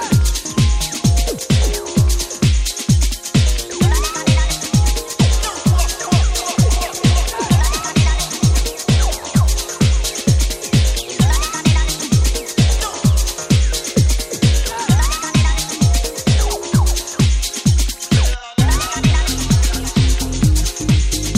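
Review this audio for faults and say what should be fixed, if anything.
Nothing stood out on listening, so there is nothing here to fix.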